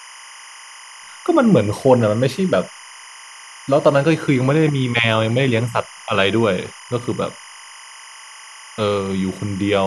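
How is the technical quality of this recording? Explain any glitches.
The recording is compromised by a constant technical fault running under the speech from start to finish.

Timecode bleed is present throughout the clip. Linear timecode, a square-wave signal running at 25 frames per second, has leaked in from an adjacent track or cable. Its two switching pitches, roughly 1 and 2 kHz, sit around 20 dB below the speech. The result is a continuous chirping, warbling buzz behind the voice that never lets up.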